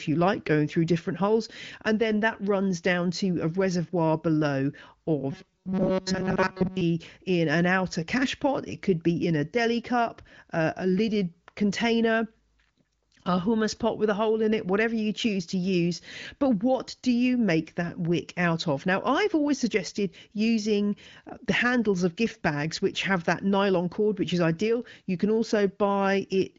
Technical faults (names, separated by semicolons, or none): robotic sound from repeated short buffers